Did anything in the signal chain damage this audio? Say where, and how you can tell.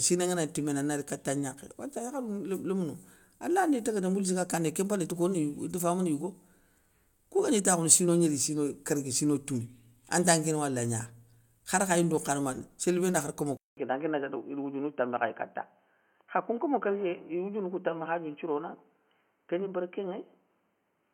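Yes. At 13.57 s the speech cuts out for 200 ms, then returns dull and boxy until the end. Nothing remains above 3.1 kHz. A faint new background noise appears, well below the speech, while the level holds steady. The capture stage likely switched input to a poorer device.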